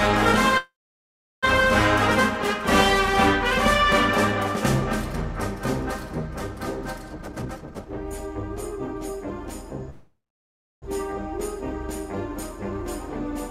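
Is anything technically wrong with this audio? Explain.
Yes. There are two call audio freezes, at 0.57–1.45 s and 9.90–10.84 s. Each is a brief fading buzz or hiss, then flat silence on the waveform (about 0.7 s), before the sound resumes intact, likely from packets delayed while the jitter buffer ran empty.

A jitter buffer speed-up runs from 7.14 to 9.32 s. Many short pitch-period cuts remove roughly a second, so the sound plays about 1.39 times faster at unchanged pitch. On the spectrogram the harmonics stay level while events crowd closer together.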